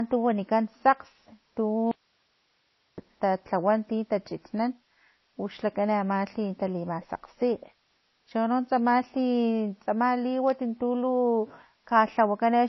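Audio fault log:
Throughout: low-bitrate audio saved at a high bitrate. The speech stops dead above 5.8 kHz and carries that smeared, swirly MP3 texture, so it was likely squeezed to about 24 kbit/s first. Re-saving it at around 179 kbit/s can't bring back anything the first pass threw away.
1.91–2.98 s: audio dropout to a faint residue. The speech cuts out abruptly for about 1.06 s and leaves only low hiss, roughly 45 dB under the speech level. It likely comes from a break in the signal feed while the path downstream kept running.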